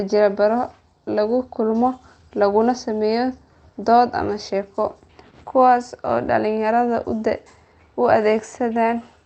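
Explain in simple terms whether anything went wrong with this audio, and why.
Nothing went wrong here: the speech comes through the way you'd expect from an ordinary internet call, with none of the glitches, dropouts or hiccups that would point to a problem.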